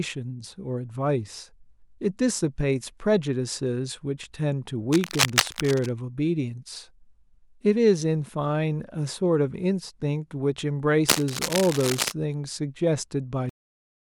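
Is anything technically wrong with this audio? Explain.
Yes. Two bursts of cable scratch noise and a cut-off end affect this speech clip.

From 4.92 to 5.89 s, then from 11.09 to 12.12 s, dense, uneven scratching and rustling sits over the speech, roughly level with it the first time and a little lower the second. The likely cause is a worn cable or connector being moved, its contact resistance fluctuating rapidly.

At 13.49 s the audio has a cut-off end: it stops abruptly mid-sound and drops straight to digital silence with no natural decay. This happens when the final stretch of audio is never written or played out.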